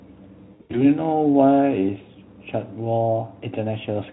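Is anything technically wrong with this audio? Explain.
Yes. VoIP packet loss concealed by the speech codec affects the speech between 0.53 and 0.85 s. About 160 ms of audio is missing, scattered over a 200 ms stretch, which points to roughly eight 20 ms frames dropping. The longest gap runs 80 ms. In each gap the decoder keeps replaying its last pitch and filter at falling gain, so the speech smears into a fading buzz or coloured noise, and it stays weak and distorted briefly after packets resume. The Speex coding itself adds at most faint damage.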